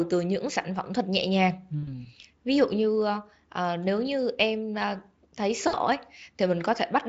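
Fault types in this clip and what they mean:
VoIP packet loss concealed by the speech codec: buzzy or noisy smeared fades at 1.83–2.07 s and 5.67–5.75 s, where the decoder stretched its last sound across 40 ms and 60 ms of missing packets.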